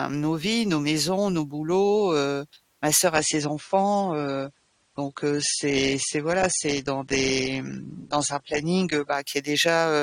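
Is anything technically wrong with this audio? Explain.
Yes. From 3.15 to 9.15 s the stream is at a lower bitrate. The connection slowed, so the player switched to a leaner encoding. Treble vanishes above 9.7 kHz and codec artefacts rise, which fits a drop from 96 to 32 kbit/s. The switches are abrupt, with no gap.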